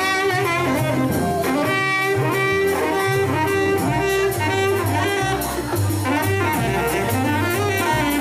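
No technical faults are audible anywhere in the audio.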